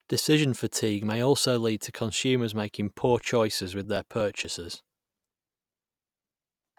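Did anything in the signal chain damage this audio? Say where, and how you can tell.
Yes, periodic USB or driver dropouts at the driver/buffer stage. From 3.84 to 6.63 s, after "consumers making poor choices", about twenty ticks recur every 0.121 s. Each one skips roughly 4 ms of audio without leaving a gap. Random network packet loss would not keep such a fixed rhythm.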